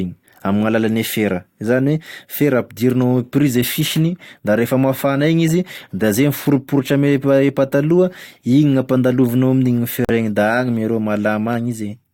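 At 10.05 s a corrupt frame muted fault cuts the speech into abrupt silence until 10.10 s. The 54 ms gap points to two compressed frames rejected by the decoder and replaced with silence by the player. Timing is preserved, so the speech resumes on schedule.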